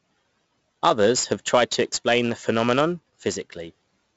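Throughout, the speech has gone through 4-bit ADPCM compression, with each sample stored as a coarse step from a prediction, which fits a 64 kbps stream at a 16 kHz rate. Heavy gritty hiss rides every loud syllable, and nothing remains above 7.7 kHz.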